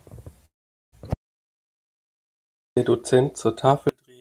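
At 0.45 s the speech stalls in what sounds like a call audio freeze, most likely the jitter buffer running dry while packets were held up. The last sound briefly carries on, then about 0.43 s of silence follows until 0.94 s. The speech then resumes where it stopped, now running roughly 0.47 s late, with nothing lost.

From 1.14 s to 2.77 s comes an audio dropout to silence. The sound cuts off mid-flow and returns abruptly, leaving about 1.63 s of silence with no room tone, likely from a lost input while recording continued. Whatever occurred in that span is gone.

From 3.89 s to the end, one channel is inverted in polarity. When the channels are summed to mono, the shared centre content cancels and the level drops by about 30 dB. Only a faint residue of the channel difference remains, likely from a reversed channel.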